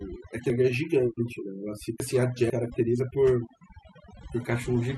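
Speech with a lowered background that breaks up into twinkling specks throughout, the result of overdone noise removal gating individual frequency bands too hard. Between 0.5 and 2.5 s the speech turns garbled and jumbled because a 500 ms chunk plays three chunks late, so the chunks are out of order.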